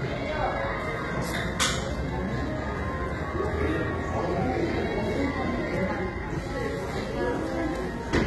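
From start to finish the treble sounds synthetic, gritty and metallic, and nothing reaches above 11.8 kHz. The damage is heavy. This is likely HE-AAC compression: the top band is copied up from lower frequencies, so its harmonics misalign. The coarseness fits a bitrate near 16 kbps.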